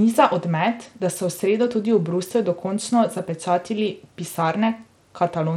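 Throughout the speech, treble flickers and drops out under a gritty, aliased grain, likely Bluetooth SBC compression at a starved bit pool near 96 kbps, coarser than MP3's swirling artefacts.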